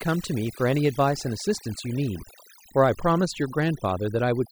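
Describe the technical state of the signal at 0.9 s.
At 0.9 s, as across the whole clip, overdone noise removal is zeroing frequency bands near the noise estimate, leaving twinkling specks in a lowered background and taking quiet parts of the speech with them.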